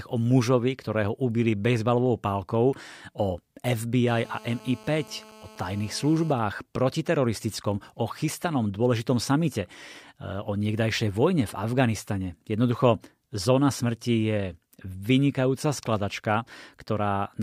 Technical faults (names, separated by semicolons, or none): GSM phone buzz; GSM signalling bursts